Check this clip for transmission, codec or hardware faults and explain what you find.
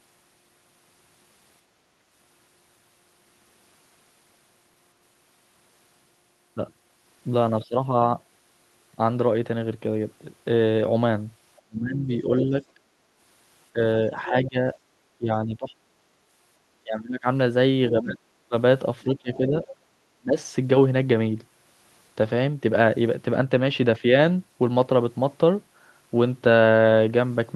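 Two echo-related faults appear in the speech, both in the middle of the clip. The Opus coding on the call path shows its expected upper limit near 12 kHz, consistent with roughly 32 kbps.

Speech suppressed in double talk occurs at 7.69–7.74 s, 11.61–12.8 s, 13.73–15.72 s and 16.82–20.38 s. The voice dips and thins, falling by about 10 dB in the brief first event and as much as about 25 dB in the second and fourth. The longest event breaks up over roughly a second and a half. The likely cause is an echo canceller that could not tell the near talker from loudspeaker echo while both sides spoke, so it attenuated everything.

The other side's voice leaks through at 12.4–12.63 s, 14.26–14.48 s and 18.09–19.74 s, each time during a stretch where the near voice is being suppressed. A second voice surfaces, about 10 dB below the speech in the first scrap, about 20 dB below in the second, and about 15 dB below in the long stretch near 18–19.7 s. 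The likely cause is residual echo. The far end played through the device's loudspeaker and was picked up by its microphone, and the canceller did not fully remove it.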